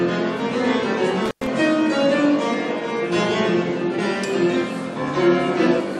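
At 0.54 s the sound lurches forward with a soft, smeared blip instead of a sharp click, dropping roughly 150 ms of material. This is compressed frames skipped: the decoder passed over whole blocks of encoded audio, so the stream resumed several 21.3 ms frames later. Overlap between neighbouring frames blurs the join into that brief smudge. The same jump recurs at 3.98 s, losing about 300 ms, and at 5.79 s, losing roughly 100 ms.

From 1.26 to 1.47 s the sound crackles, then drops away for about 106 ms, leaving only faint hiss, before crackling back in. That pattern is intermittent contact: a loose cable or plug opened the connection briefly, and the scratchy edges come from the contact breaking and remaking.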